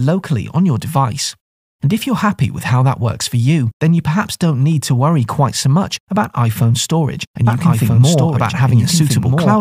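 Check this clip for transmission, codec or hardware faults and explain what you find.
One fault is present: a doubled audio track from 7.47 s to the end of the clip. A second full-band copy of the sound enters abruptly and trails the original by roughly one and a half seconds, at about the same level. The copy is most likely a second capture through a slower path or two out-of-step copies in an edit. It has no decay or room colour, so the material is simply heard twice, overlapping, until the clip ends.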